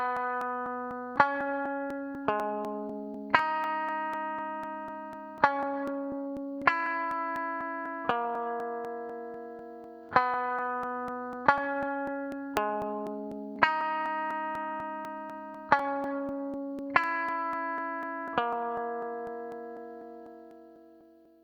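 A background task appears to be stalling the USB link or audio driver at a fixed interval, giving periodic USB or driver dropouts from 0.17 s to 21.25 s. Every 0.248 s, roughly 2 ms of audio is skipped outright rather than filled with silence, about a hundred times in all. Each skip splices the waveform abruptly, so the sound carries a steady train of ticks, roughly four per second, audible wherever signal is present.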